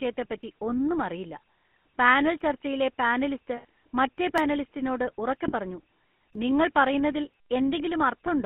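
The whole recording carries the GSM full-rate codec: a buzzy, gravelly roughness laid over the speech, which is typical of a 13 kbps vocal-tract model driven by sparse pulses. On a spectrogram, energy is confined to roughly 150 Hz to 3.4 kHz, with a hard ceiling and a coarse, pulsed texture in the harmonics.

At 0.43 s, just before "ഒന്നും അറിയില്ല", the audio skips, and it skips again at 2.41, 4.38 and 6.35 s. About 15 ms vanishes each time, and the two sides are butted together, likely from audio missing between chunks as a buffer is handed over. The waveform shows a sudden discontinuity with no silent gap.

From 3.57 to 3.65 s, and again from 5.48 to 5.53 s, lost GSM frames were concealed by repeating the last good frame. The 80 ms and 40 ms spans fit about four and two 20 ms frames. They sound like a brief rough, metallic ring. A spectrogram shows frozen, smeared bands.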